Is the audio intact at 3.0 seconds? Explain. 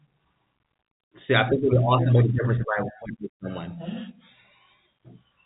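Yes, at 3.0 seconds the speech plays through cleanly, carried by ordinary G.711 telephone coding with its narrow band topping out around 3.8 kHz.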